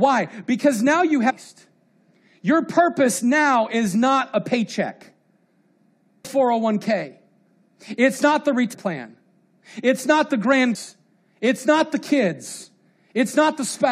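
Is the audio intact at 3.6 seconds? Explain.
Yes, at 3.6 seconds the speech plays through intact, with no audible fault at that moment.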